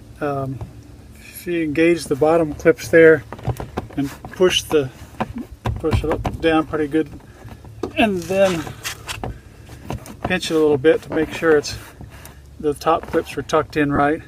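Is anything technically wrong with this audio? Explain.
Yes. There are lost LE Audio frames at three points: 6.37 to 6.39 s, 11.13 to 11.16 s and 13.96 to 13.99 s. The first gap is 20 ms, which fits two 10 ms frames; the later two are 30 ms each, consistent with three. Where frames drop out over the Bluetooth link, the LC3 decoder fills in by repeating the last spectrum with randomised signs, so the sound briefly turns into a short, noisy smear instead of a clean dropout.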